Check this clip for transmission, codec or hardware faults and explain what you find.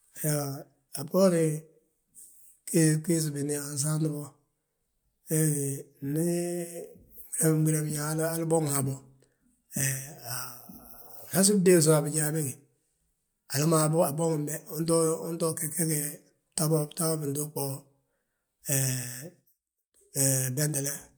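No transmission, codec or hardware faults are audible in this speech recording, and the signal holds steady throughout.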